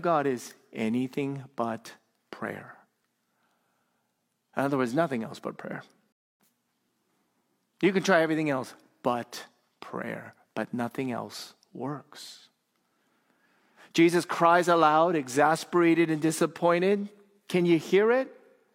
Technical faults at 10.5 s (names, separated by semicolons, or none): none